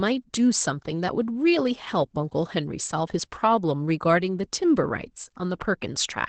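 Opus voice compression runs through the whole speech clip. The encoder appears to be in its SILK linear-prediction mode at wideband, so nothing survives above about 8.7 kHz. The excitation is coded coarsely, and the damage is plainly audible: the speech sounds muffled, hoarse and faintly robotic. That fits a bitrate of around 12 kbps, with the coder working in 20 ms frames.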